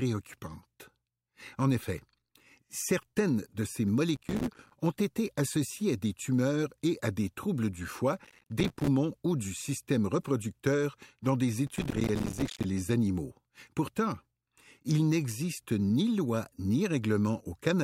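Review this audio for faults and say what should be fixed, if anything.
Processor overload crackle shows up at 4.16–4.73 s, 8.24–8.88 s and 11.67–12.64 s: short buffers of around 5 ms miss their deadlines, and the dropouts leave gritty crackle. Fix it with a larger buffer or less load on the processor.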